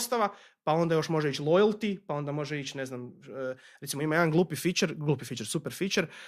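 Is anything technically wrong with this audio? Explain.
No, I hear no technical faults in this speech recording.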